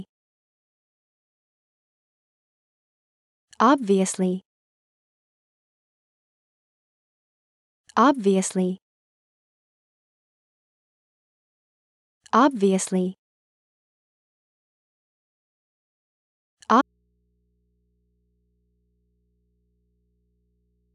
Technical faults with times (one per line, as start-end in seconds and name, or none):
16.81-20.94 audio dropout to a faint residue